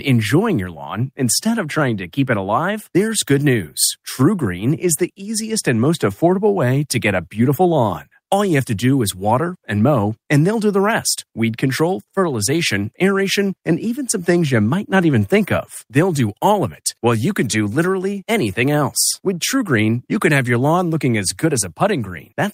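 Nothing here calls for comment, as the speech runs along without any audible glitch, dropout or other technical fault along the way.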